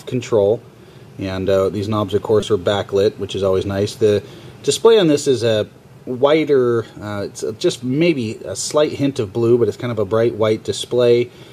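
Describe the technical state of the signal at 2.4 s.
A brief click or buzz sounds from 2.41 to 2.43 s: a repeated buffer, where the last piece, apparently about 5 ms, replayed four extra times, replacing roughly 20 ms of audio.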